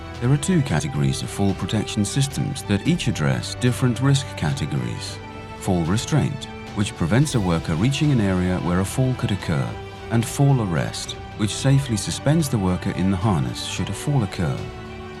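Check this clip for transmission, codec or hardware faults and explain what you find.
One fault stands out. Compressed frames skipped at 0.79 s: a single 20 ms frame appears to be missing or rejected by the decoder, so playback jumps ahead by about 20 ms.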